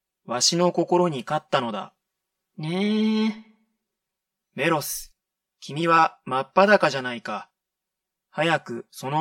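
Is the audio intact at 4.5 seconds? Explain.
No. Channel delay (comb filtering) runs through the whole clip, including 4.5 s: one channel arrives about 5 ms late, so the mono sum cancels at evenly spaced frequencies from around 100 Hz upward, leaving the speech hollow and phasey.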